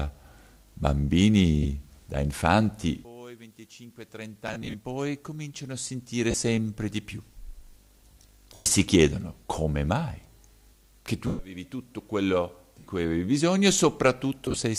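Lost LE Audio frames at 1.63, 4.48–4.75 (scattered), 6.31, 8.54–8.66, 11.27–11.39, 12.79 and 14.46–14.59 s: the decoder conceals each gap by repeating the last spectrum with scrambled phase, so tones smear into noise, and longer losses fade rather than dropping to clean silence or clicking.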